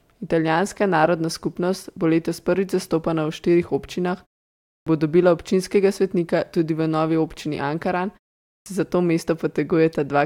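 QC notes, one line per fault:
4.67–4.87 s and 8.44–8.66 s, clipped start after a pause: after gaps of 0.49 s and 0.34 s, the output device was still waking and swallowed about 195 ms before "bo dobila občinskega svetnika" and 220 ms before "se za to". The waveform jumps abruptly from flat silence into speech, and the spectrogram shows no onset energy.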